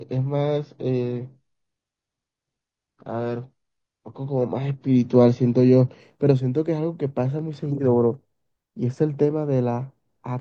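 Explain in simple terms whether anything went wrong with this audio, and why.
The player began on a low-quality version of the stream, an adaptive stream starting at a low bitrate, then switched up once it had gauged the connection. So for the first 6 seconds the speech sounds dull and smeary, then it suddenly turns clear, with no gap.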